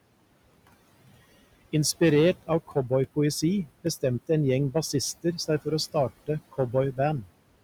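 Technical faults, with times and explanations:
Throughout, hard clipping: the level is pushed about 6 dB past what the chain can handle, so the loudest peaks, a small slice of the samples, get chopped flat. Those squared-off tops spray high harmonics, which you hear as a gritty crackle on louder syllables.
Throughout, noise suppressor artifacts: the suppressor drops the steady background by about 20 dB whenever the talker pauses, then lets it back in under the speech. The room noise, sitting about 17 dB below the voice, pumps in and out with each phrase.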